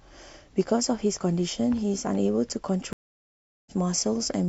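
Speech goes silent at 2.93 s for 731 ms, then resumes at 3.71 s about a third of a second further on: a stream reconnect, with the decoder restarting mid-stream.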